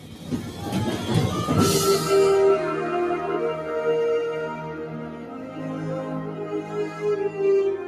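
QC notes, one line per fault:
Throughout: noise suppressor applied to music or sounds. The level pumps and flutters as sustained parts sink and attacks push through, a gain swing of about 10 dB. A speech-tuned suppressor was left on, treating steady tones and decays as noise and ducking them.
0.00–0.64 s, 4.59–5.63 s and 6.04–6.47 s: sound cut by the noise suppressor. In these stretches the sound thins and sags by up to about 6 dB (about 5 dB in the last). The suppressor mistook this material for noise and pulled it down harder than the surrounding audio.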